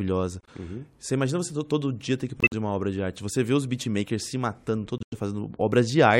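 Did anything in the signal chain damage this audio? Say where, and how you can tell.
Yes, at the codec decode stage. The speech cuts to dead silence at 0.41–0.49 s, 2.40–2.54 s and 4.98–5.18 s. Each gap starts abruptly, and timing is kept. This is corrupt frame muted: the decoder rejected damaged compressed frames, and the player substituted silence.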